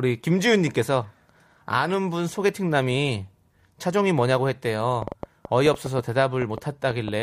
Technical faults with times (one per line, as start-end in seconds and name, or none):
5.02-7.09 train of clicks